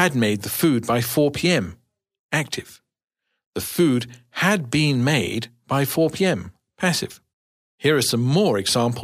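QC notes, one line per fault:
No faults found on this speech clip.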